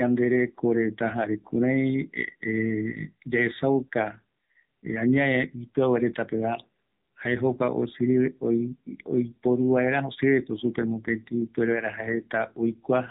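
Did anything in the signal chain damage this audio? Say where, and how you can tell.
Yes: an AMR narrowband mobile codec throughout chops off everything above 3.8 kHz, and audibly buzzy, synthetic speech suggests a low bitrate around 7.4 kbps.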